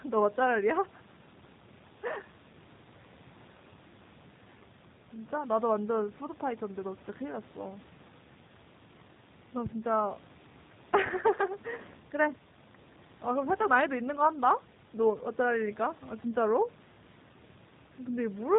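Throughout, the speech shows plainly audible G.729 codec damage: nothing above 3.8 kHz, and a rough, synthetic texture from pulse-based reconstruction, which fits 8 kbit/s.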